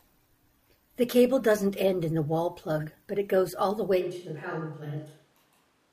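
At 4.02 s the speech turns abruptly roomy and hollow and stays that way to the end, the sound of a switch to a distant microphone, likely because the close microphone's signal dropped out and a farther one took over. The level falls by roughly 5 dB, and room noise sits around 35 dB below the speech. On a waveform the envelope shrinks at once, with softer transients. A spectrogram shows thinner low frequencies, smeared reverberant tails and a raised noise floor.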